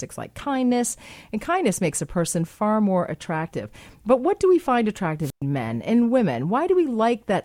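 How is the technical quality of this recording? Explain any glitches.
One glitch stands out in the speech. A wireless microphone squelch dropout occurs at 5.21 to 5.42 s: the analogue FM radio link weakened until the receiver's squelch muted its output, leaving a hole of near silence lasting about 117 ms. Static or hiss swells just before that gap, and then the speech returns.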